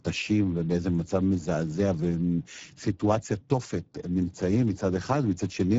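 It's speech run through the Speex codec the whole way, and the damage is plainly audible: hoarse, noisy speech from a starved CELP excitation, which fits a low setting around 10 kbps. Nothing comes through above 7.7 kHz.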